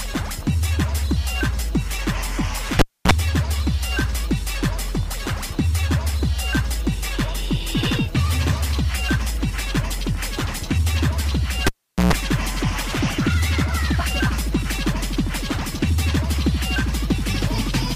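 A cable is pulled and plugged in twice, at 2.79 s and 11.67 s. Each time a pop cuts the sound for about 270 ms, then about 410 ms. A 60 Hz mains buzz follows as the plug's tip touches first, and a second pop marks the return.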